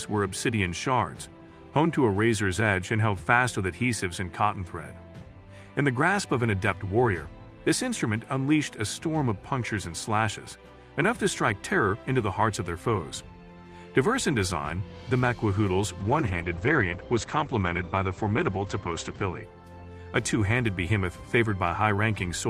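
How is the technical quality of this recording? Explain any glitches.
There's one glitch. From 16.01 to 19.49 s a call bitrate drop hits: the encoder falls from 32 to 10 kbps and trims bandwidth from 20 kHz to 8 kHz, so the sound goes muffled and watery for about 3.2 s.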